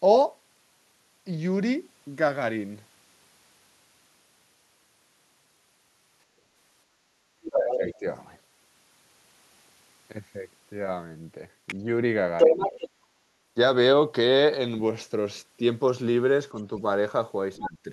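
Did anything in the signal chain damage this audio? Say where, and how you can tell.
Yes. Background gated by the echo canceller at 6.25–6.45 s: call processing pulled the microphone down about 12 dB while the loudspeaker played, so room sound dips briefly.

Other side's voice leaking through at 7.44–7.94, 11.67–11.75 and 12.38–12.89 s: a second voice appears, from well below to slightly above the talker, likely residual loudspeaker echo the canceller missed.

Speech suppressed in double talk at 7.58–8.05, 12.47–12.59 and 17.58–17.88 s: the talker dips roughly 10 dB, deeper at the end, likely the canceller ducking both sides during overlap.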